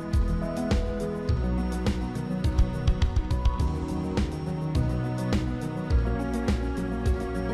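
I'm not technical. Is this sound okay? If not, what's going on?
Yes, no faults here.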